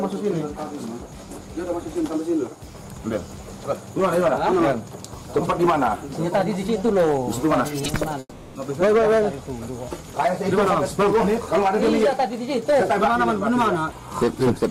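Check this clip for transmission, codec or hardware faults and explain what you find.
One fault is present. From 8.19 s to 8.57 s, a long network dropout is the likely cause. The last sound stretches into a fading buzz or hiss for about 360 ms. A brief silence of about 20 ms follows. The audio then resumes with about 360 ms missing.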